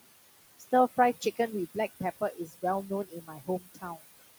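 Noise suppressor artifacts run throughout: the suppressor pulls the steady room noise down by about 18 dB frame by frame, so the noise sinks between the words and rises under them. Speech cut by the noise suppressor follows at 2.21–2.63 s, 3.09–3.49 s and 3.75–3.97 s, each affecting roughly a tenth to a fifth of a second. The suppressor mistakes quiet speech for noise and drops it by about 14, 14 and 16 dB, so those parts sound swallowed.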